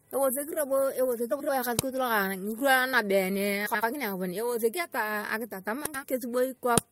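At 1.31 to 1.50 s, 3.66 to 3.84 s and 5.86 to 6.04 s the speech has frames out of order. Two adjacent blocks of about 85 ms (76 ms in the last) swapped places, so each stretch plays its halves reversed as a garbled flutter, without losing time. On a spectrogram, harmonic contours break and jump back.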